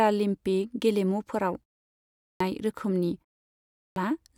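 Speech with a clipped start after a pause at 1.98 s and 3.47 s, where the output device wakes late and swallows about 0.42 s and 0.49 s of speech, unlike muted pauses, which lose nothing.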